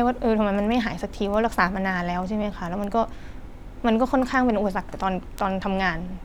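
A single bit flipping in a stored sample or on a digital link causes the bit error spikes at 1.34 s, 2.84 s and 5.39 s. Each time, one or two samples jump by a power of two and snap straight back, reaching about −24, −18 and −12 dBFS in turn. Each spike is heard over the speech as one sharp, broadband tick with no connection to the sound around it, and the ticks grow louder through the clip.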